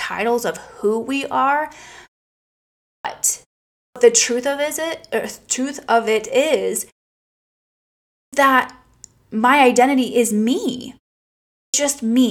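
Speech with a clipped start after a pause at 2.87, 3.80 (before "the truth of is"), 8.17 and 11.56 s. Each onset loses 0.16 to 0.18 s as the sleeping output device wakes.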